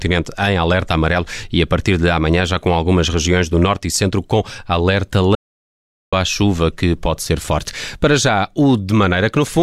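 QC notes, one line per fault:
5.35–6.13 s, audio dropout to silence: after "e centro com alerta", 0.77 s of dead silence, no room tone. Resumes at "à chuva que pode". Input likely lost.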